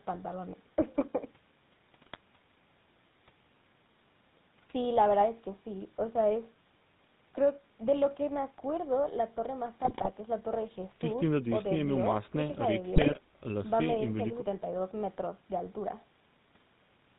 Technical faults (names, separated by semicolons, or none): GSM full-rate codec; GSM bit errors